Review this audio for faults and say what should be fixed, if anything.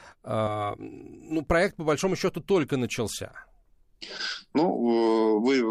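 From about 0.47 to 1.47 s, just before "проект по большому счету", there's channel delay (comb filtering). The speech turns hollow and phasey, like it's coming through a tube. One channel is running a few milliseconds late, around 3 ms, and when the two get summed to mono the shared content cancels at evenly spaced frequencies. The first notch sits somewhere near 200 Hz, and the rest repeat up the spectrum. To prevent it, check channel alignment and phase before any mono fold-down, and correct or drop the late channel if they don't line up.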